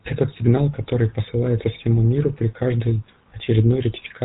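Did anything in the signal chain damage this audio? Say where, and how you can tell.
Yes: a GSM full-rate codec stage, fitting a 13 kbps rate, rebuilds the speech from pulse-driven vocal-tract models, giving plainly audible buzzy roughness throughout, with nothing above 3.8 kHz.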